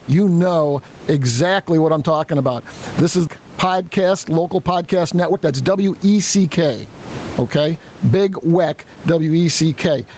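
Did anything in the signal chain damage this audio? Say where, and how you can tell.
Yes. Throughout the clip there is gain pumping, with a gain swing of around 20 dB. The likely cause sits at the capture stage, with input gain set far too high for the microphone and a fast limiter or compressor clamping down on each peak. The speech comes out squashed, with loud and soft passages pushed close together in level.

The second fault is a jitter buffer speed-up on the receiving side of the call, from 5.15 to 6.70 s, starting just after "local podcast". There the speech runs at about 112% speed with its pitch unchanged, so it sounds hurried. The buffer had grown beyond its target, probably after delayed packets arrived in a burst. It then cut out short slices of one or a few pitch periods, one after another, about a fifth of a second in all.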